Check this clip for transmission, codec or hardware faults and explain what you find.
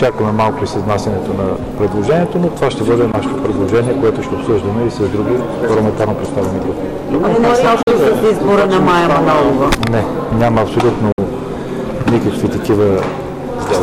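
Two problems here: constant clipping and three short gaps.

Hard clipping runs the whole way through. The signal is driven about 15 dB past what the chain can pass, so around 7 percent of samples get sheared flat. That gives a harsh fuzz on every loud stretch.

Three abrupt silences, at 3.12 s, 7.83 to 7.87 s and 11.12 to 11.18 s, are likely Bluetooth dropouts. They last roughly 15, 44 and 58 ms, consistent with one, three and four lost packets. Sound cuts out, then resumes further along.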